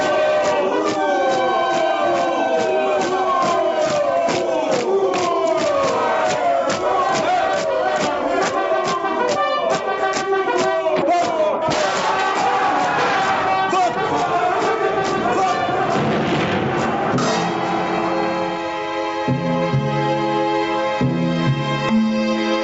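Gain pumping runs throughout: the level ducks by roughly 15 dB under each loud sound, squashing loud and soft parts together. The likely cause is a fast limiter or compressor reining in input gain set far too high.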